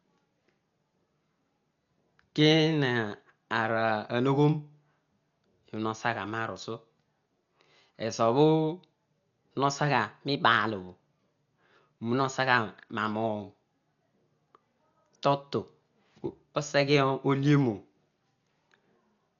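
Dolby Digital compression runs throughout this speech clip: the sound is dull and heavily damaged, with nothing above 6.9 kHz and a rough, fluttering noise around tones. The likely cause is a low-bitrate encode, one that fits about 48 kbps, that narrows the band and replaces starved frequency lines with dither noise.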